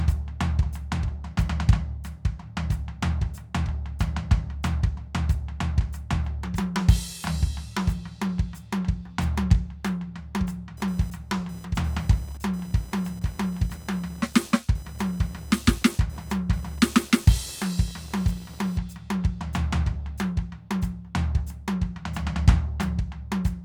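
From 10.77 s to 18.77 s there's computer activity noise under the music: a buzzy, chirping whine pulsing at roughly 1 kHz, sitting somewhere around 25 dB below the music. It's the computer's load swings leaking through the shared ground into the audio circuit.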